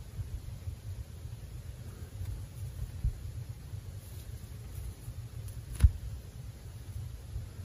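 Nothing is technically wrong with the audio in this clip.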